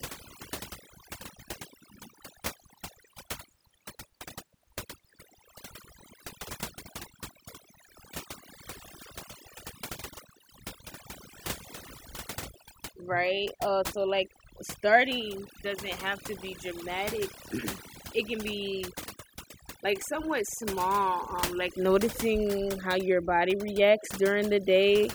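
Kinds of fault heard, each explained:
overdone noise removal: A noise reduction stage set far too aggressively runs through the whole speech clip, pulling individual frequency bands down hard whenever their level sits close to what it has judged to be noise. The gaps between phrases collapse into near silence dotted with twinkling, chirpy specks, and softer parts of the speech are stripped along with the noise. Unlike a low bitrate codec, the damage tracks the noise floor, not the loudness of the sound.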